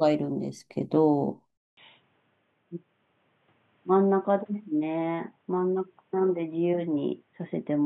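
At 1.57 s the speech breaks off for about 200 ms, then returns duller and boxier, and it stays that way to the end. Nothing is left above about 3.8 kHz, the level sits roughly 5 dB lower, and a new background noise appears, faint, around 40 dB under the voice. This sudden shift in bandwidth, tone and noise floor most likely means the input switched to a poorer device mid-recording, such as another microphone or a headset's narrowband call profile.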